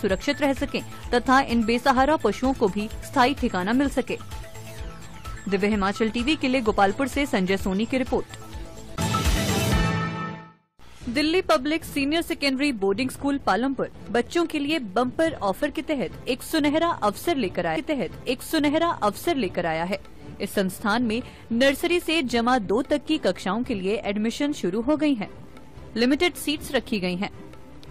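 At 17.75 s a short blip marks a jump back, and roughly the preceding 2.0 s of sound plays again, running to 19.75 s before moving on. This is a stream segment repeated: the player fetched or queued the same chunk twice, lengthening playback by that amount.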